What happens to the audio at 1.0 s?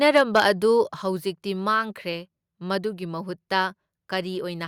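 At 1.02 s the speech and the background noise under it drop together by about 5 dB in a single abrupt step, and they stay at the lower level afterwards. This is a microphone volume stepped down. The likely cause is the call software judging the input too hot and cutting the capture device's input volume at once instead of easing it down. Because the cut is applied before any processing, everything the microphone picks up falls by the same amount.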